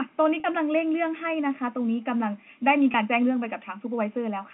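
At 0.40 s, about 40 ms of packets went missing, and the receiver bridged the gap by repeating the last pitch period of the speech. This packet loss with pitch repetition makes the sound briefly hold on a slightly buzzy, frozen tone before the speech resumes.

At 0.78 s the waveform jumps abruptly from one value to a later one, likely because of dropped samples, with only a single sample or so missing. Far too brief to remove anything audible, the jump is heard as one sharp click, a thin vertical line across the spectrum.

At 2.92 s a second packet loss with pitch repetition covers a 20 ms gap the same way. It leaves an even shorter held buzz, heard within the narrow G.711 telephone band.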